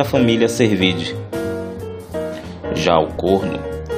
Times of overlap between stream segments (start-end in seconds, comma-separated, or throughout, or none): 3.17